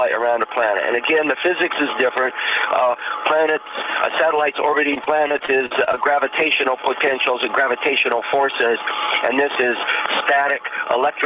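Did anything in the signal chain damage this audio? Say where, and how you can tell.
Yes, at the network stage: repeated packet loss (robotic sound) from 4.94 to 5.99 s. Ten gaps, the longest 45 ms, were filled by extending the preceding sound, choppy and robotic. Spectrograms show smeared, repeated frame blocks; waveforms show copied cycles. Content stops at 4 kHz, fitting G.711.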